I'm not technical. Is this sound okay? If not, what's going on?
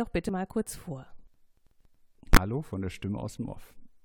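No. At 0.29 s and again from 2.33 to 2.37 s, the sound jumps ahead by about a twentieth of a second. These are compressed frames skipped: small chunks of the stored audio were never played.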